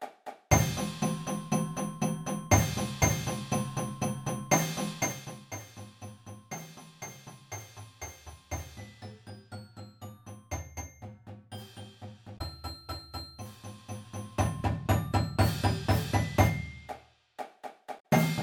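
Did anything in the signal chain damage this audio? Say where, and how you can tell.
Yes. Damaged data in a compressed stream at the codec/storage stage: corrupted frames make the decoder lose sync, heard as brief glitches at 12.34 to 12.41 s and 17.96 to 18.05 s.

Zipper noise from unsmoothed gain in the playback/driver stage: the level changes about 15 dB in 2 dB steps, roughly seven per second, ticking audibly from 13.58 to 14.87 s.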